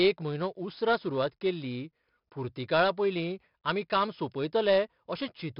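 Heavy 4-bit ADPCM compression runs throughout: coarse steps leave gritty hiss on loud speech, blurred attacks, and nothing above 5.3 kHz, which fits about 44 kbps.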